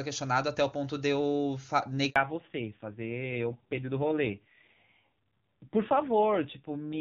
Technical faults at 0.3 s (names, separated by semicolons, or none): none